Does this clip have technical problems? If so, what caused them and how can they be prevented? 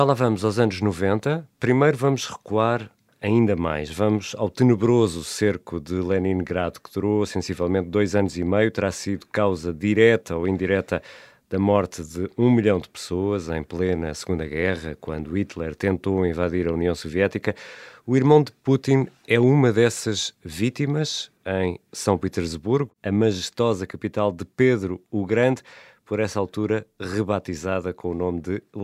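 No, the signal shows no technical faults that would need a cause traced or a prevention step.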